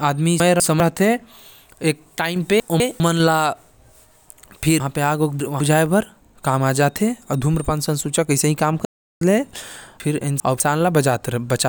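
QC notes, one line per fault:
0.4–0.8 s, 2.6–3.0 s, 4.8–5.6 s and 10.0–10.6 s, chunks out of order: in each of these spots a 200 ms piece of audio turns up late and plays after material that should come after it. It's one chunk late in the first two spots, three chunks late at 4.8 s and two at 10.0 s. Nothing is missing, but the speech jumps back on itself.
8.85–9.21 s, playback stall: the audio cuts to silence for about 0.36 s mid-flow, then resumes. That's long enough to hear clearly as a hitch rather than a click. The likely cause is the player running dry of buffered data, or its audio thread getting blocked, so nothing reached the output until it recovered.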